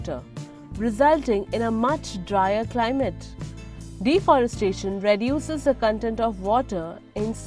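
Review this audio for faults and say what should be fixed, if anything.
Nothing here needs fixing, as no technical fault can be heard anywhere in the recording.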